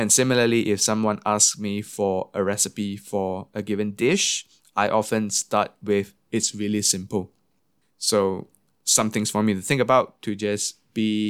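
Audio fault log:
No faults found in the speech on the full listen.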